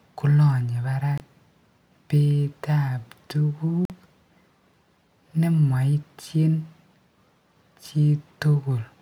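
At 1.18 to 1.20 s and 3.85 to 3.90 s the speech cuts to silence for about 23 and 46 ms, then resumes further on, likely Bluetooth dropouts from one and two late packets.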